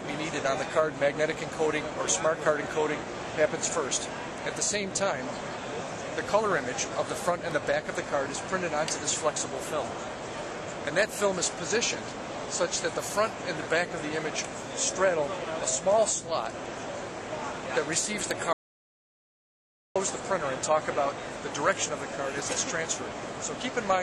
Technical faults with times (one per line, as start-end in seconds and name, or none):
18.53-19.96 audio dropout to silence